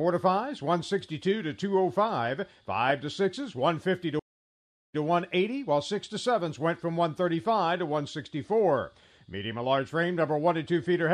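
A stream reconnect breaks this audio at 4.19 s: playback drops out for about 0.7 s (715 ms) and resumes at 5.01 s. The connection failed, the player stopped producing sound, then reconnected and started a fresh decoder partway through the stream. The server appears to have resent a short burst of recent data, so the audio picks up about 0.1 s (104 ms) earlier than where it cut off, briefly repeating material.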